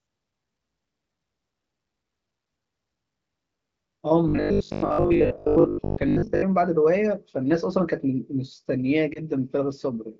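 From 4.28 to 6.42 s the speech goes robotic, a rigid metallic buzz pitched at 50 Hz that still loosely tracks the talking. That's most likely robotic sound from repeated short buffers. The audio wasn't arriving fast enough, so the playback side kept looping its last little chunk while fresh material got dropped. A 50 Hz buzz means each loop is 20 ms long, which fits a 20 ms buffer, and it sounds like the bulk of that stretch is repeats rather than real signal.

Then from 9.13 to 9.19 s there's a quick dip and warble. That's a lost AMR speech frame, a single 20 ms frame that didn't make it through. The decoder covered the gap by reusing the previous frame's pitch and vocal tract settings at reduced gain, so you get a brief smear instead of a hole, and the voice is a touch rough for a moment as it recovers. The underlying AMR wideband (HD Voice) coding sounds clean around it, the way you'd expect at one of its higher rates.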